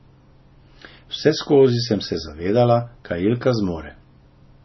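Throughout, the speech carries heavy MP3 compression damage, likely from a bitrate near 24 kbps. Nothing survives above 5.9 kHz. The sound turns watery and swirly.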